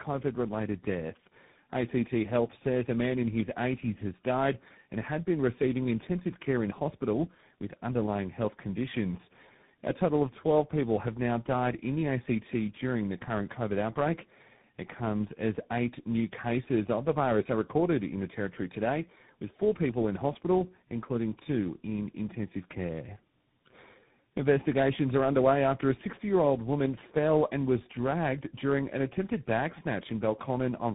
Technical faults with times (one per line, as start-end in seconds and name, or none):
0.00-30.94 tandem speech coding